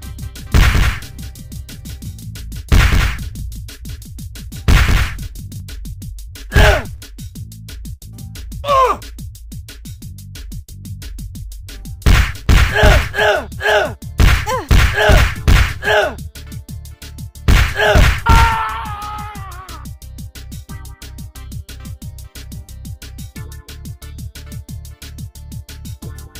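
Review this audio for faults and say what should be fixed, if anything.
From the start to 5.6 s, a doubled audio track: a full-band copy about 5 dB down trails by roughly a fifth of a second, with no decay or room colour, unlike reverb, and stops abruptly. The likely cause is a second capture path or misaligned edit, so monitor only one input route and check edits for duplicate overlapping regions.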